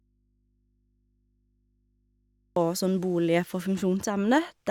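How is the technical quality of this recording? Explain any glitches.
There's one glitch: an audio dropout to a faint residue from the start until 2.56 s. The speech is missing, leaving only low hum roughly 45 dB down, likely a lost feed on a still-live input.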